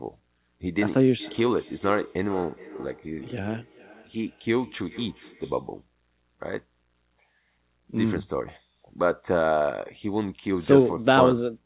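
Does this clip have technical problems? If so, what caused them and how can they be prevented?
Yes. From 1.18 to 5.73 s there is feedback echo between two devices: two devices in the same room are joined to the call, so one plays out what the other's microphone sent, that microphone captures it again, and neither echo canceller removes sound from the other device. The speech returns roughly every 0.4 seconds, thinner and ringing, peaking about 18 dB below the direct speech, all below the call path's normal 4 kHz ceiling. To prevent it, mute or disconnect the second device, or have everyone use headphones.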